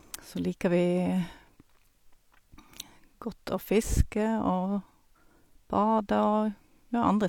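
No technical faults can be heard in this recording.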